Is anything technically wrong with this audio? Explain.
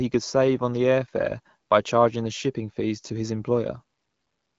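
No, nothing technically wrong is audible here.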